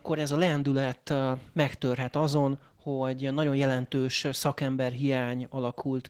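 From start to end the speech carries plainly audible Opus voice compression. The character suggests hybrid operation at a low rate, around 16 kbps in 20 ms frames: a linear-prediction layer codes the band below 8 kHz with a coarsely quantised excitation, and a thin transform layer covers the top of a full-band signal. The result is hoarse, slightly robotic speech.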